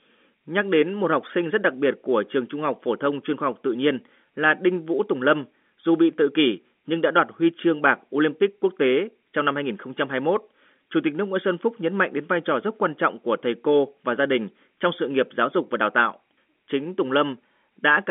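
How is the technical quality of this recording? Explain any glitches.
No glitches can be heard anywhere in the recording. The speech arrives through an ordinary G.711 telephone channel, so it sits within the 200 Hz to 3.4 kHz line band, with nothing above 3.7 kHz.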